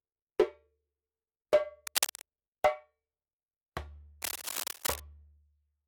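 From 1.87 to 2.26 s, and again from 4.22 to 5.00 s, cable scratch noise rasps over the sound. The first burst is about as loud as the audio itself, the second a little quieter. The likely cause is a worn connector being moved. On a spectrogram each burst shows as dense, ragged broadband streaks, and the waveform shows jagged, irregular spikes.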